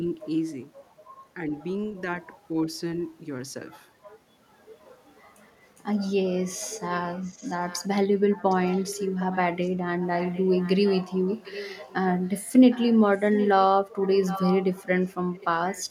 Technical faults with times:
1.50-1.55 speech suppressed in double talk
6.91-7.88 echo leak
8.30-11.94 echo leak
12.26-13.49 echo leak
14.03-15.85 echo leak

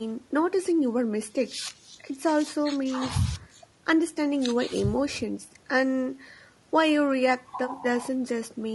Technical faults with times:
0.00-8.75 low-delay AAC compression

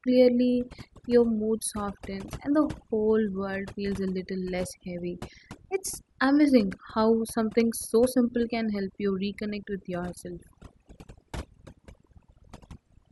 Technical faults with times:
0.00-13.12 overdone noise removal

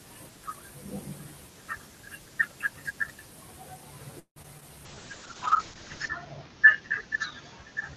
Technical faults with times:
4.19-4.63 repeated packet loss (robotic sound)
4.86-7.96 call bitrate drop

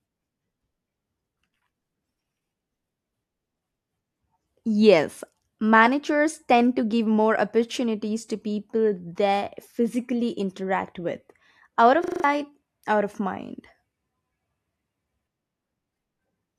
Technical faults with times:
12.04-12.24 system hang loop

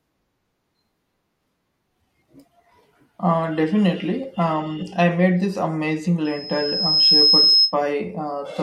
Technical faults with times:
6.25-7.75 loudspeaker feedback squeal

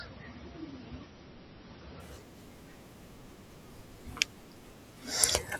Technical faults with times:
0.00-2.00 adaptive stream starting at a low bitrate

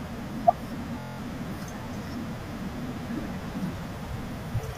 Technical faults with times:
1.00-1.18 system hang loop

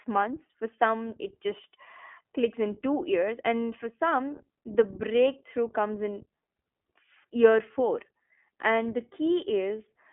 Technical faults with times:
0.00-10.12 iLBC codec

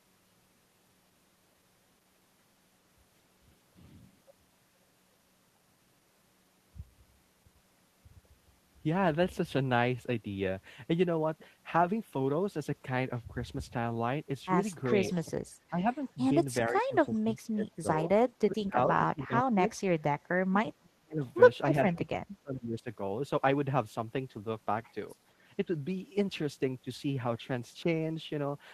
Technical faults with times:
15.00-15.86 speech suppressed in double talk
15.12-15.17 echo leak
16.69-19.65 speech suppressed in double talk
17.91-17.97 echo leak
20.34-21.22 speech suppressed in double talk
21.26-21.32 echo leak
21.96-22.87 speech suppressed in double talk

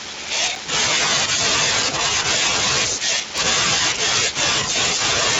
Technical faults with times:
0.55 block of digital silence
3.38 block of digital silence

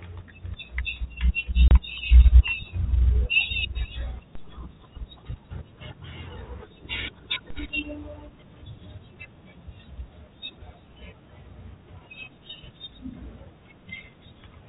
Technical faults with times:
1.68-1.71 packet loss filled with silence
4.35 DC step
7.50 DC step

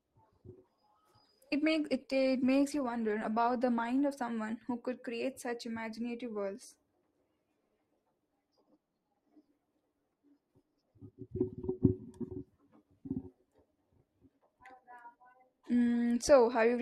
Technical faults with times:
0.00-4.00 adaptive stream starting at a low bitrate

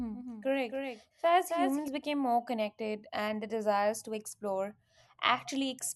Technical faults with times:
0.00-1.88 doubled audio track

